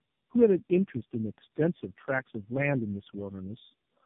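From start to end the speech carries tandem speech coding: it has passed through several speech coders in a row, about four of them, each decoding and re-encoding the previous one's already damaged output, which fits a chain ending in AMR-NB. The errors compound, so the sound is rough, muffled and warbly. A spectrogram shows nothing above 3.7 kHz, with smeared, blotchy formant bands and patchy gaps between harmonics.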